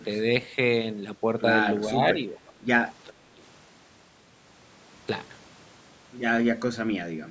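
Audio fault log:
1.89–2.52 s, 3.10–3.14 s, 3.35–3.40 s: speech suppressed in double talk. The voice dips in brief patches by up to about 10 dB, likely the echo canceller ducking it while the far end talks.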